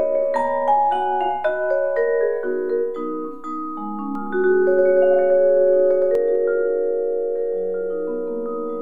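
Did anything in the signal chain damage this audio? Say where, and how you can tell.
Yes. From 4.15 s to 6.15 s there is a doubled audio track: a full-band copy trails roughly a tenth of a second behind at about equal level, then cuts in and out abruptly. On a spectrogram every onset appears twice; the waveform shows repeated transients. A second capture path or misaligned edit is the likely cause.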